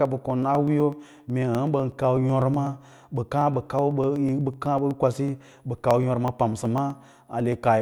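From 0.05 to 7.65 s, periodic USB or driver dropouts skip about half a millisecond every 0.124 s, giving evenly spaced ticks, unlike random crackle, that sound only during speech.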